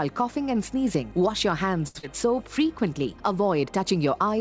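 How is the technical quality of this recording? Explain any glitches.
Three brief call-network glitches cluster between about 1.9 and 2.7 s, heard through a call codec with nothing above 8 kHz, which fits G.722.

At 1.88 to 1.97 s there is a short stall from a late packet. The jitter buffer ran dry, so the last sound is held for 70 ms, then resumes without losing anything. It holds rather than smears.

At 1.99 to 2.05 s, short concealed packet loss leaves 60 ms of audio missing, covered by 38 ms of extrapolated sound. Unlike the stall, something is actually lost, heard as a quick smear.

From 2.25 to 2.69 s, a jitter buffer slow-down repeats pitch periods to add 37 ms. The audio runs at 93% speed with unchanged pitch, a gradual drag rather than a single hold.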